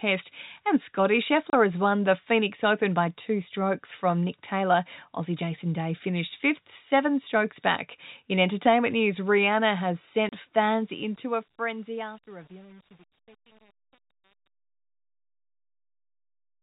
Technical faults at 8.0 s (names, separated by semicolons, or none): none